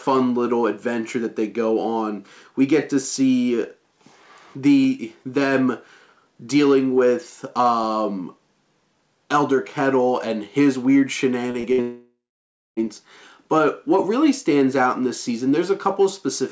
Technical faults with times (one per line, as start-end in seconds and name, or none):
11.51-11.66 short concealed packet loss
11.72-11.81 burst of packet loss
11.81-12.80 long network dropout